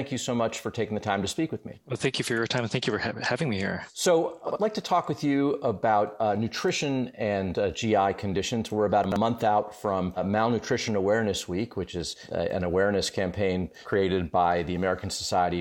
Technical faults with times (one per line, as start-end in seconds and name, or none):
4.48-4.56 chunks out of order
9.04-9.16 chunks out of order